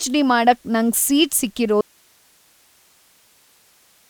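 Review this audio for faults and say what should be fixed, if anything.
There's an audio dropout to a faint residue starting at 1.81 s, right after "ಮಾಡಕ್ ನಂಗ್ ಸೀಟ್", and it runs to the end of the clip. The speech cuts off abruptly rather than fading, and all that's left is hiss sitting roughly 40 dB below the earlier level. The chain after the break clearly stayed live, so the likely cause is the source signal being lost upstream, such as a loose cable or a wireless link dropping. To prevent it, secure connections and monitor input levels during recording so a lost feed gets caught immediately.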